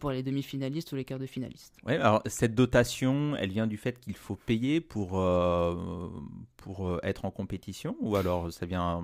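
No technical faults can be heard anywhere in this speech.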